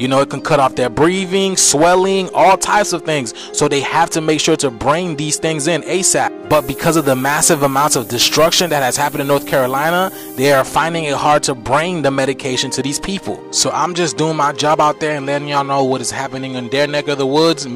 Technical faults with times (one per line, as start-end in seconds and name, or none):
6.51-10.62 low bit depth with noise shaping